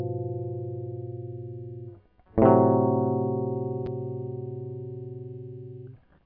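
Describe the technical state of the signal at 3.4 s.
At 3.4 s the music plays through intact, with no dropout, click, distortion or other audible fault at that moment.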